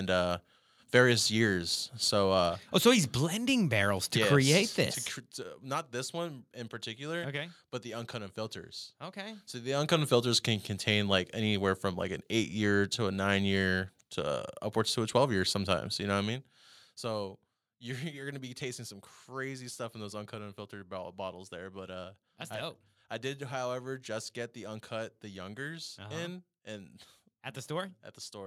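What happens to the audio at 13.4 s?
Nothing goes wrong at 13.4 s; the speech carries on intact through that moment with no fault to be heard.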